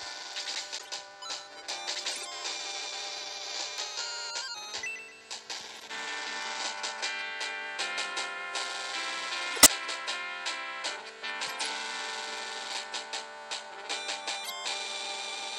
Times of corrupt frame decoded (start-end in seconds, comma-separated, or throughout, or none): 0.78-0.87, 2.11-2.24, 5.74-5.82, 9.53-9.67, 11.46-11.63, 14.43-14.52